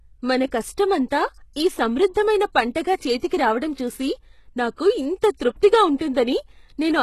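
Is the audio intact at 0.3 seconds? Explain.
No. At 0.3 s, as across the whole speech clip, the treble sounds gritty, with s sounds metallic or lispy and nothing above 12.3 kHz. This is likely HE-AAC compression at a rate that fits about 16 kbps: the upper band is rebuilt from copied lower bands, not simply filtered away, so it stays bright but misaligned.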